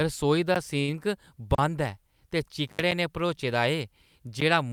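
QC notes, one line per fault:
0.55 s, 1.55–1.58 s, 2.91 s and 4.40 s, block of digital silence: the speech drops to silence and snaps back with no fade. The two 11.6 ms holes at 0.55 s and 4.40 s fit a 512-sample buffer that was not filled in time. The 35 ms gap at 1.55 s is heard as a short hole and the 6 ms one at 2.91 s as a tick. On the waveform each is a flat line with abrupt edges. The spectrogram shows a blank vertical strip with thin broadband lines at both edges.
0.79–0.91 s, short stall from a late packet: a packet arrived late and the receiver held the last sound for about 85 ms until it came, then resumed from the same place. Nothing is lost, but the speech hangs unnaturally long with a faint buzzy, looped quality. On the spectrogram the harmonics run flat and repetitive for that span. The waveform shows a repeated cycle pattern rather than a gap, and everything afterwards is shifted about 85 ms later.
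2.68–2.81 s, intermittent contact: a loose connection opens for about 74 ms, so the speech cuts out with crackle at the breaks, and faint hiss remains while the line is open. On the waveform the signal collapses to a low noise floor, not true zero, with spiky bursts at each edge. On the spectrogram the harmonics vanish, leaving diffuse low-level noise bracketed by scattered broadband crackle marks.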